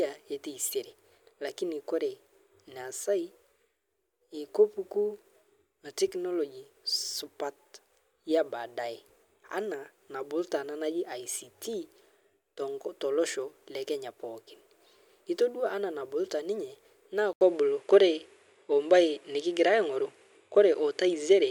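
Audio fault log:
17.33 to 21.50 s, input switched to a poorer device: after an 80 ms silence the sound turns dull, likely from another input. A spectrogram shows nothing above 11.4 kHz and new noise about 55 dB down; the waveform shows the gap and a level step of about 5 dB.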